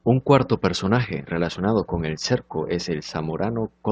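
No technical faults are audible.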